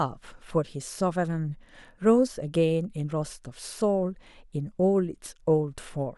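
Speech recording with no technical problems to be heard.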